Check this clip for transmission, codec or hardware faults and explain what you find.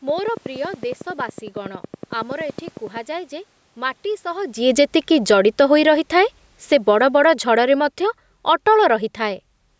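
Two faults are audible: a regular click train at the start and a gradual automatic gain reduction over the second half.

From 0.09 s to 2.98 s a train of clicks runs at a steady 10.8 per second, about thirty in all, with peaks about 15 dB above the signal. The pulses are near-identical and evenly spaced, which points to a periodic injection, likely interference from nearby equipment or a faulty connection or power supply. They are heard as sharp ticking over the speech and through its pauses.

From 4.57 s to 9.5 s the automatic gain is falling. The control judged the input too loud, or its background noise too strong, and backed its gain off gradually, by about 10 dB over that span. Because the gain acts on the whole signal, the speech and the room noise behind it sink together, rather than the voice alone receding. The talker also shifts position at about 4.5 s, just before the gain starts dropping.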